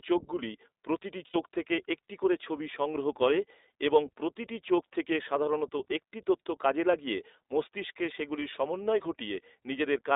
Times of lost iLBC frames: 1.28-1.36, 8.40-8.44

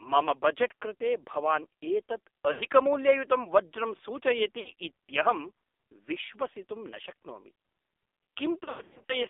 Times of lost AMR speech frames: 2.52-2.62, 4.60-4.73, 8.64-9.21

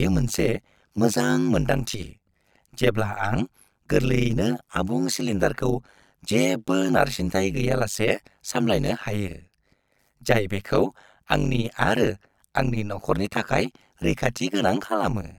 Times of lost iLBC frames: none

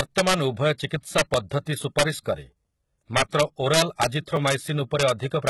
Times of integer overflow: 0.00-0.34, 1.18-1.37, 1.99-2.03, 3.17-4.06, 4.47-4.54, 5.00-5.10, 5.47

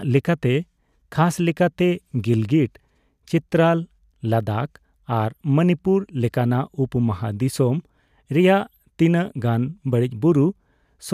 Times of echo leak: none

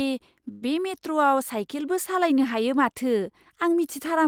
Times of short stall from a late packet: 0.51-0.75

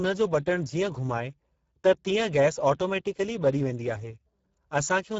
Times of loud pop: none

